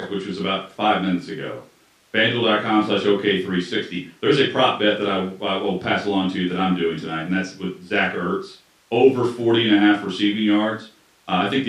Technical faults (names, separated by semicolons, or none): none